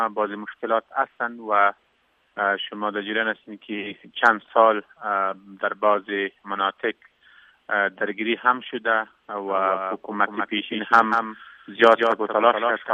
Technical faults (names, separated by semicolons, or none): doubled audio track